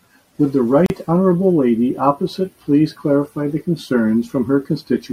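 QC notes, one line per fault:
0.86–0.90 s: gap at a join of encoded pieces. A 37 ms silence breaks the speech with smeared edges, then the speech resumes exactly where it stopped, with nothing missing, unlike a dropout. Untrimmed encoder start delay and last-frame padding remain at the join.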